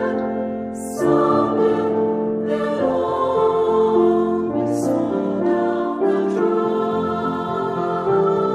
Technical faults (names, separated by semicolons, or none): none